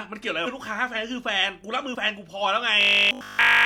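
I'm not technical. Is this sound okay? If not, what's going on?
No. Two kinds of fault can be heard.

The first is damaged data in a compressed stream. In two short spots, part of the compressed file was corrupted, so the player lost its place and had to search for where the next usable chunk began. You hear this as a quick chirp or blip: once from 0.42 to 0.48 s, and again from 1.91 to 1.96 s. Each glitch lasts only about a twentieth of a second.

The second is robotic sound from repeated short buffers, running from 2.81 s almost to the end at 3.65 s. The likely cause is that new audio stopped arriving in time, so the software kept replaying the last tiny scrap, about 20 ms long, instead of playing the real speech. All of that stretch is repeats, which turns the voice into a stiff, metallic buzz at about 50 Hz that only loosely follows the speaking.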